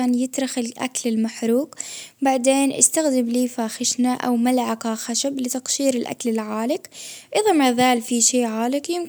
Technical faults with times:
none

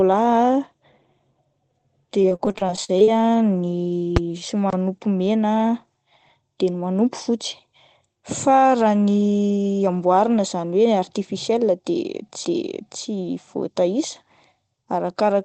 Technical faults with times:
2.22-3.08 repeated packet loss (robotic sound)
4.16 invalid numbers at full scale
4.70-4.73 CD skip

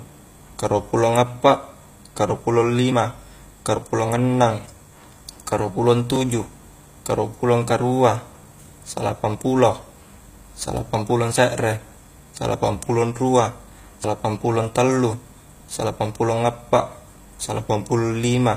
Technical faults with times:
0.00-18.57 HE-AAC compression
14.04 dropped buffer (overrun)

